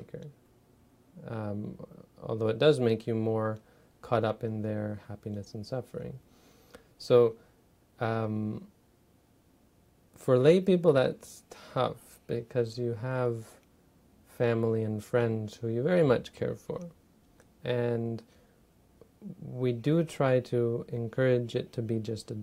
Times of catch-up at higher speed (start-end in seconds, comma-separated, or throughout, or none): none